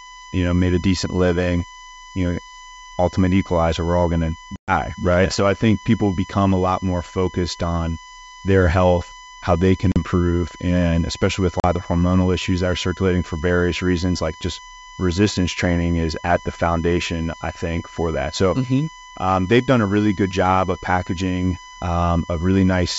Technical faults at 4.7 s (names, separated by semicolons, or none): USB whine; packet loss on an ADPCM call